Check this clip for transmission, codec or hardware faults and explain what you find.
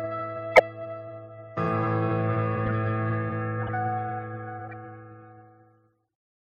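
Four short bursts of corrupt frame decoded in the music, at 0.55 to 0.61 s, 2.65 to 2.72 s, 3.63 to 3.71 s and 4.65 to 4.74 s. Damaged compressed frames were played anyway, throwing energy to wrong frequencies. Each is a brief chirp or noise burst; the first is loudest.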